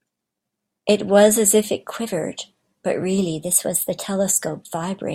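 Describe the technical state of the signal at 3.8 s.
At 3.8 s the speech runs about 5.3% fast and sits roughly 89 cents sharp, close to a semitone. This lasts from 3.39 to 4.05 s, then snaps back. It is likely a drift correction step, where clock-matching software briefly changed the playback rate.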